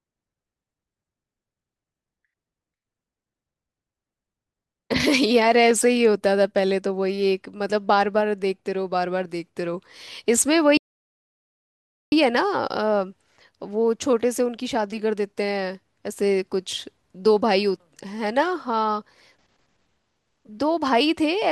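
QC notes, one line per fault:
10.77–12.12 s, playback stall: the speech cuts off mid-flow and the output goes fully silent for about 1.35 s before resuming, likely because the player ran out of buffered data or its playback thread was briefly blocked. On the waveform this is a flat line with abrupt edges on both sides; the spectrogram shows a clean vertical gap with no energy in any band, not even background noise.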